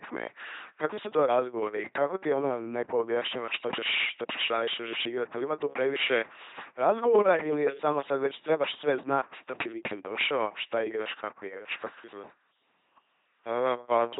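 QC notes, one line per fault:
Throughout, LPC-10 vocoder: the speech comes out as a buzzing, mechanical robot voice with heavy codec damage. Each moment is rebuilt as purely voiced pulses or pure noise through a short filter, consistent with a 2.4 kbit/s stream. Nothing is heard above about 3.8 kHz.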